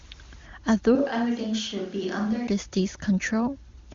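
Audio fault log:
0.96 to 2.47 s, switch to a distant microphone: the speech abruptly turns hollow and roomy, thinner in the bass and roughly 5 dB quieter, with room noise rising to around 25 dB below the speech, then snaps back to the close, full sound at 2.47 s. The likely cause is the close microphone dropping out while one further away took over, capturing more reflections and ambience. The AMR wideband band limit near 7.4 kHz carries through unchanged.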